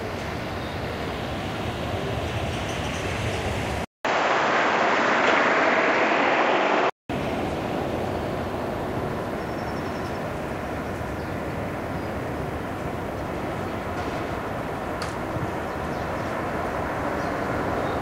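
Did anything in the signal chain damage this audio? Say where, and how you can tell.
Yes. The input was likely switched to a poorer device at the driver stage: after a 200 ms silence at 3.85 s, the audio carries nothing above 7.6 kHz until 7.10 s.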